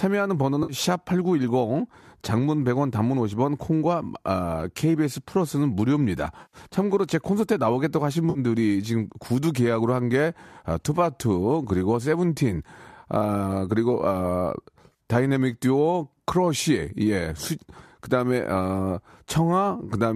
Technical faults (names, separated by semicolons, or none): AAC frame loss with concealment